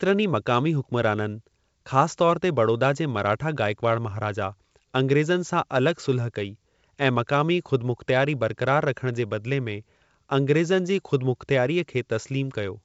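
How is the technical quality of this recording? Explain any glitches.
No glitches are audible anywhere in this speech recording.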